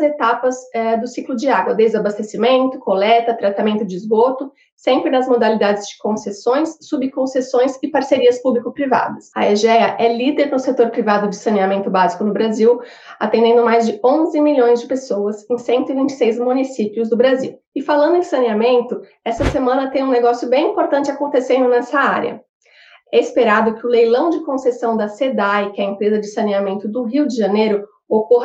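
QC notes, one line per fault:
No technical faults are present anywhere in the signal.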